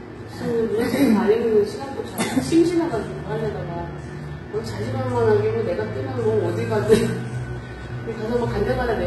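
Throughout, the treble sounds gritty and metallic yet stays bright up to a hard stop near 11.8 kHz, which likely points to heavy HE-AAC compression near 16 kbps, with copied-up replicated bands rather than a simple dull low-pass.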